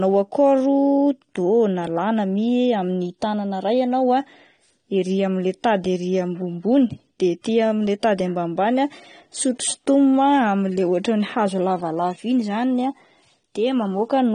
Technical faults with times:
0.00-14.34 low-bitrate audio saved at a high bitrate

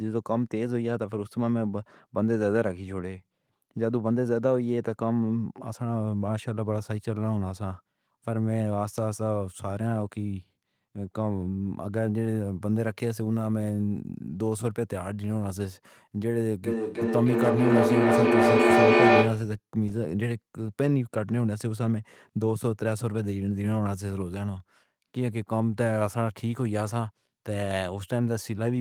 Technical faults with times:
16.66-19.58 feedback echo between two devices

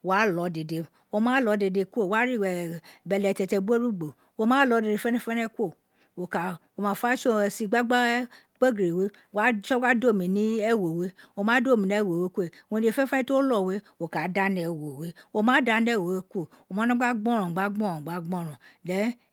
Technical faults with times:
none

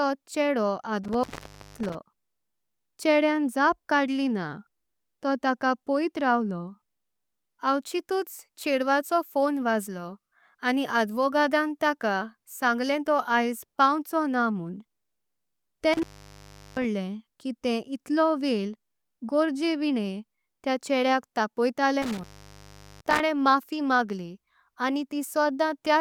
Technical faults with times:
1.04-1.95 intermittent contact
15.93-16.84 intermittent contact
22.02-23.20 intermittent contact

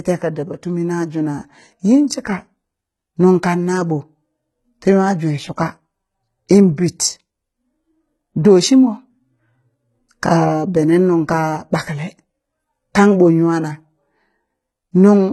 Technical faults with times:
0.00-15.33 HE-AAC compression

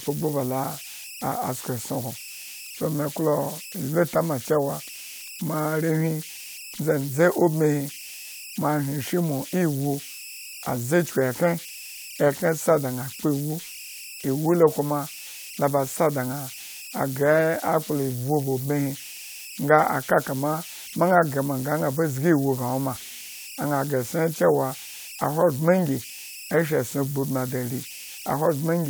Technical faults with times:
0.00-28.89 converter idle tones

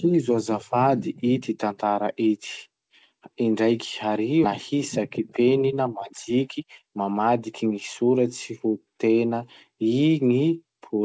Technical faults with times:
4.44 skip ahead
4.74-8.18 jitter buffer speed-up

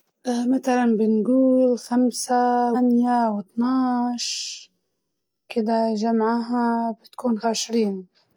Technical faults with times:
2.71-2.76 compressed frames skipped
7.40-7.45 compressed frames skipped

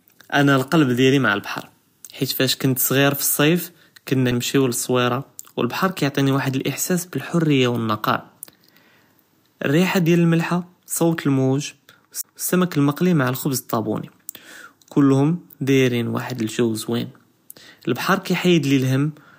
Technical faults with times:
4.31 CD skip
12.21-12.24 CD skip

